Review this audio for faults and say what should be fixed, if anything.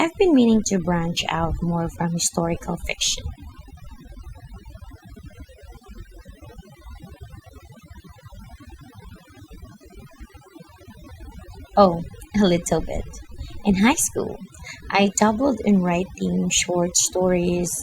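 Overdone noise removal throughout: bands near the noise estimate are pulled down hard, leaving near-silent background with twinkling specks and quiet parts of the voice removed along with it. Set the noise reduction gentler and reapply it to the original noisy recording.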